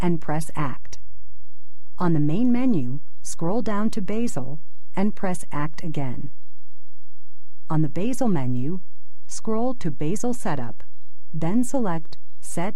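A DC offset runs through the whole clip, from start to finish. The entire waveform sits shifted off the zero line by a fixed amount, about -15 dBFS. You cannot hear this shift as a tone. It shows instead as a constant component at 0 Hz, the very bottom of the spectrum. It also eats headroom, because peaks on one side reach full scale sooner. A click can appear wherever the audio starts or is cut.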